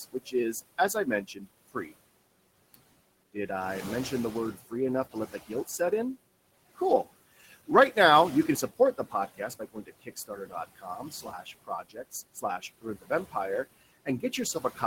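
Speech, with a noise suppressor cutting what it judges to be steady noise by about 20 dB, frame by frame. This produces noise suppressor artifacts throughout: the room noise, about 15 dB below the voice, drops away between phrases and swells under them. The suppressor also mistakes parts of the speech for noise, causing speech cut by the noise suppressor at 0.12 to 1.92 s (about half a second affected, dips near 19 dB), 5.11 to 5.92 s (about 16 dB), 7.41 to 7.97 s (about 14 dB), and from 8.47 s to the end (up to about 21 dB), where soft consonants and word endings sound swallowed or faint.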